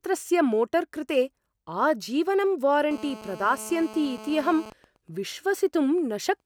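Speech carries a GSM phone buzz from 2.91 s to 4.67 s, a hard, raspy tone at 217 Hz sitting about 17 dB below the speech and ignoring it entirely. A nearby 2G handset in a call was transmitting its radio bursts 217 times a second, and the audio circuit rectified them into sound. On a spectrogram this shows as a dense comb of horizontal lines spaced 217 Hz apart, reaching high up the band. The waveform shows a regular pulse train every 4.6 ms. At 4.67 s the sound changes to GSM signalling bursts, lasting until 6.41 s, much quieter at around 25 dB under the speech. The handset was still in the call, but with its user silent it sent only short groups of bursts, producing even ticks with a longer 217 Hz buzz twice a second. On a spectrogram these appear as separate short blocks of the same harmonic comb with gaps between them, and in the waveform as clustered spikes rather than a continuous train.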